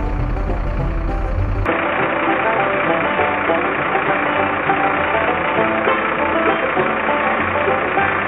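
At 1.66 s the audio abruptly turns dull and boxy and stays that way to the end, with nothing above about 3.8 kHz. The change happens with no gap and no real jump in level, but a faint new background noise floor comes in with it. This narrowing of the band and change of tone is most likely an input switched to a poorer device mid-recording, such as a second microphone or a headset's call profile.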